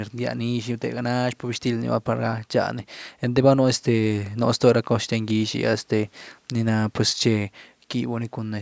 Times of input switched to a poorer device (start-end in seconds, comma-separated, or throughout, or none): none